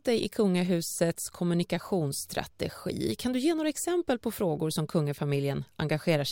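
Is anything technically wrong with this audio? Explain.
No, nothing technically wrong turns up here; the speech comes through without any fault to point at.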